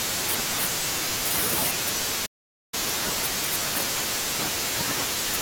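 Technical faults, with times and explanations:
2.26 to 2.74 s, playback stall: speech drops to silence for 467 ms mid-flow, then resumes, likely because the player ran dry of buffered data.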